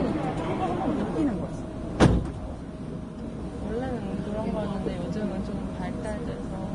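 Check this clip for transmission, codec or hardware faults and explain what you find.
There's one fault, and it runs the whole way through. Likely Vorbis compression at a low bitrate, around 29 kbps: nothing above 10.6 kHz, with the coarsely quantised treble turned grainy, hissy and smeared on attacks.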